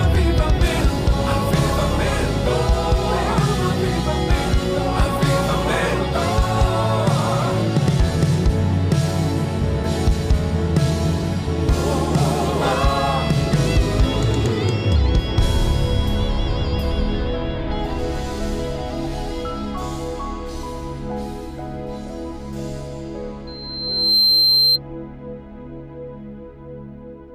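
Loudspeaker feedback squeal breaks out from 23.47 to 24.79 s: a single tone at 4.1 kHz swells over roughly 0.7 s until it stands around 5 dB above the rest of the audio, then stops. A microphone is picking up the loudspeaker it drives, and at 4.1 kHz the round trip returns more signal than it sent, so that one frequency keeps feeding itself and growing until the loop is broken.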